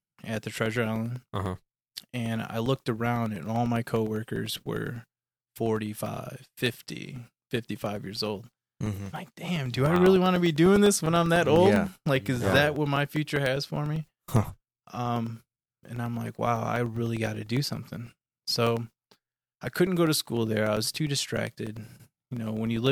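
Periodic USB or driver dropouts run from 0.06 s to 22.87 s, spaced every 0.1 s, ten per second across the whole speech clip. Each time, something blocks the USB bus or audio driver and a slice of roughly 2 ms is replaced by silence. The result is a steady ticking or popping pattern riding on the speech, audible wherever there is signal and vanishing in pauses, with around two hundred gaps in total.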